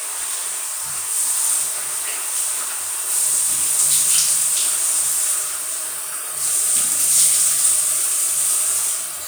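No technical faults can be heard anywhere in this audio; the signal stays intact and stable throughout.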